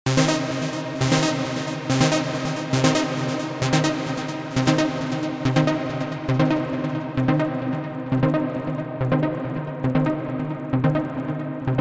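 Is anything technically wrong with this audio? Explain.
Yes. Throughout, the resampler was restarted on every block, which fits a 24 kHz to 16 kHz conversion run on 50 ms blocks with no edge context, leaving a 20 Hz buzz of ticks under any sound.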